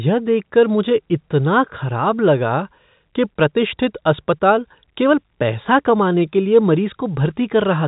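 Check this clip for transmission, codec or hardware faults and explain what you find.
No transmission, codec or hardware faults are audible: the speech sits within an intact telephone band that stops at about 3.8 kHz, as expected of G.711 A-law coding at what sounds like the standard 64 kbps, with at most a faint level-following quantisation hiss beneath it.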